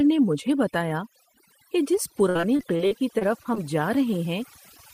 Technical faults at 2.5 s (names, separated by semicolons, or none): overdone noise removal; repeated packet loss (robotic sound)